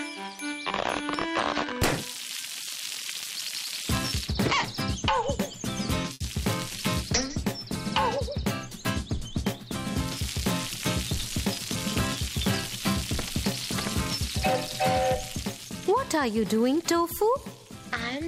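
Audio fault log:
6.13–6.22 s, short stall from a late packet: the sound holds for about 70 ms with a faint buzz or dip, then resumes exactly where it paused, so nothing is lost.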